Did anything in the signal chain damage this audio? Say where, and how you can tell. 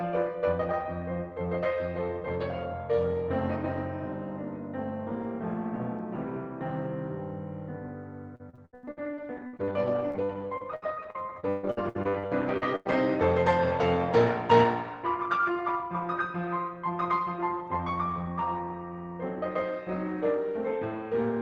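Yes: repeated packet loss (robotic sound) in the network stage, 8.35 to 12.93 s, with 28 gaps of up to 142 ms patched by repeating sound. It turns the music choppy, and appears as smeared, stuttering blocks on a spectrogram.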